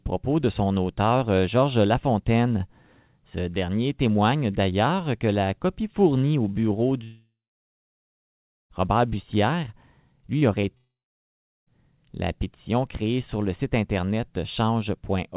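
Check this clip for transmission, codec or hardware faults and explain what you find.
Yes, there are a few transmission faults here, all heard through a narrowband call path with nothing above 4 kHz, which fits G.711 mu-law at 64 kbps.

Long network dropout, 7.04 to 8.71 s and 10.77 to 11.68 s: the sound carries on briefly as a fading buzz or hiss, then goes quiet for about 1.4 s and 0.8 s. This is likely stalled packets, so the gaps are lost and the sound resumes after them.

Short concealed packet loss, 10.39 to 10.43 s and 10.61 to 10.65 s: about 20 ms went missing each time, and the receiver patched the gap by extending the previous sound before blending back. You hear a quick smear or wobble just before the second dropout.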